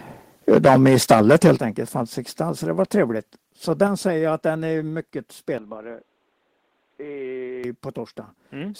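From 0.5 to 1.52 s the loudest syllables of the speech take on a harsh, crackling edge. This is likely microphone overload: the input runs about 11 dB past the converter's limit, so the peak tops are sheared flat, with several percent of the samples clipped.

At 0.57 s, inside that stretch, the level drops abruptly by about 3 dB, then again at 1.56 s by about 8 dB and at 3.87 s by about 4 dB. The likely cause is the microphone volume being stepped down, with the call software cutting input gain in single jumps.

At 5.58 s the speech turns dull and boxy with no gap, falls roughly 5 dB, and carries a new noise floor some 35 dB below it. It clears again at 7.64 s. This is likely the input being switched to a poorer, narrower-band device for that span.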